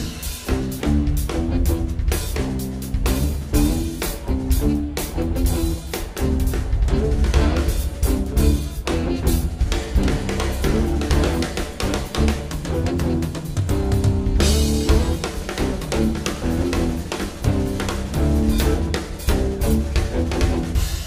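Nothing is technically wrong with this audio.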